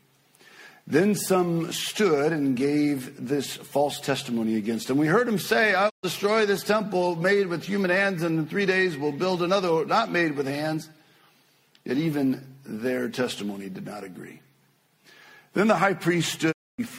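Digital broadcast dropout: the receiver lost good frames and muted, quickly fading out over about 20 ms. The sound drops to silence from 5.88 to 6.05 s and again from 16.51 to 16.80 s before returning, and what was sent during each gap is lost.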